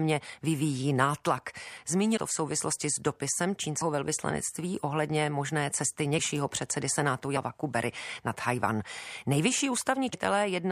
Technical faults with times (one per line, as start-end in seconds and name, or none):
2.16 compressed frames skipped
10.12 compressed frames skipped